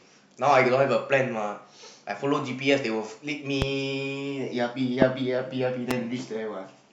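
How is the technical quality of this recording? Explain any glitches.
Three loud pops mar the speech, at 3.62–3.64 s, 5.02–5.05 s and 5.91–5.93 s. Each is a single sharp crack about 25 ms long, jumping to roughly 20 dB above the surrounding speech, while the voice continues unbroken beneath it. The likely cause is a brief electrical spike, such as static discharge, a switch or connector contact, or a driver hiccup, that adds a sudden voltage pulse to the signal and is then shaped by the downstream circuitry.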